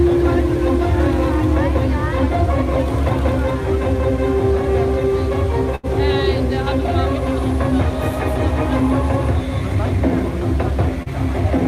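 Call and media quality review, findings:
Burst of packet loss, 5.75 to 5.86 s. Roughly 80 ms of the last sound is held and faded by receiver concealment. The audio resumes about 40 ms further on, so that stretch is gone. A jitter buffer delay shift of about 39 ms accompanies the loss.

Short concealed packet loss, 11.03 to 11.09 s. A brief smear where the decoder extrapolates about 33 ms from the preceding sound, then crossfades back into received audio. Around 40 ms of the original sound is missing. Network-side loss, concealed at the receiver.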